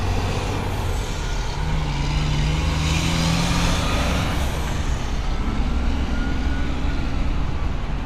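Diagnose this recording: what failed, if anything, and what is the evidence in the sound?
A dull, gurgling graininess runs through the whole clip, with nothing above about 15.1 kHz and upper detail flickering in and out. The likely cause is MP2 compression at the codec stage, consistent with roughly 80 kbps, starving sub-bands of bits so they drop out or quantise coarsely.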